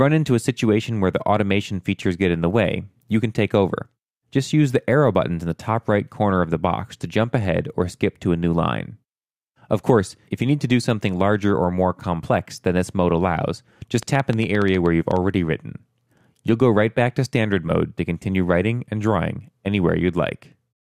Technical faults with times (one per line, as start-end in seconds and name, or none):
14.03-15.17 train of clicks